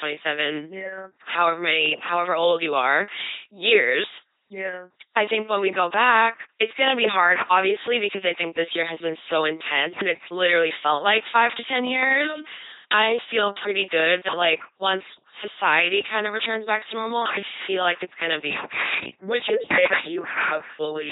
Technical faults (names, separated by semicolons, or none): LPC-10 vocoder